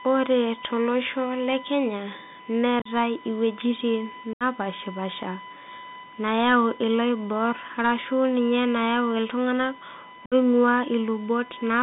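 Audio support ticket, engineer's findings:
USB whine: steady 1 kHz tone through the whole clip, about 20 dB under the speech. On a spectrogram, a thin unbroken horizontal line at 1 kHz. Probable component is the USB interface: 1 ms bus-frame current draw leaking into the audio via power or ground.

Bluetooth CVSD headset codec: narrowband throughout, passband roughly 150 Hz to 3.7 kHz, consistent with a 64 kbit/s CVSD headset link. Spectrogram shows a hard ceiling near 3.7 kHz. Plainly audible codec damage: scratchy sibilants, granular hiss under speech, slope-overload distortion on loud highs.

Unconcealed Bluetooth headset packet loss: dropouts at 2.79–2.87 s (45 ms lost in a 60 ms span, longest run 37.5 ms), 4.33–4.43 s (75 ms) and 10.26–10.34 s (60 ms). Lost headset voice packets replaced by silence or an idle pattern. Waveform shows gaps with abrupt edges.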